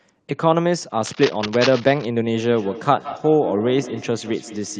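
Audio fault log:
0.98–2.05 s, cable scratch noise: dense, uneven scratching rustles over the speech, not far below its level, likely from a worn cable or connector being moved.
2.25–4.79 s, feedback echo between two devices: speech returns thin and ringing every 150 ms or so, up to about 13 dB down, as a nearby device replays it into the microphone.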